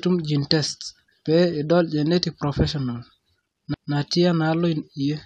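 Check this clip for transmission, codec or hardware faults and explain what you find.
One hardware fault is audible: a single CD skip in the speech.

CD skip at 3.74 s. The laser pickup lost its track, most plausibly from a knock or a flaw on the disc surface, and landed on a different turn of the spiral. The player briefly mutes while it relocks, here for only a few milliseconds, then resumes from the new position. It is heard as a short tick followed by an abrupt discontinuity, with the speech jumping to a different point rather than continuing smoothly.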